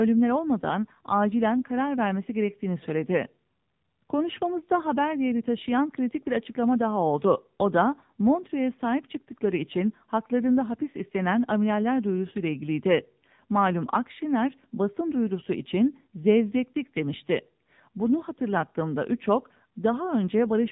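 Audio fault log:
Throughout: AMR narrowband mobile codec. Everything above 4 kHz is gone, and the speech has that buzzy, synthetic edge from a vocal-tract model driven by sparse pulses. The damage is plainly audible, which fits a low rate around 7.4 kbps.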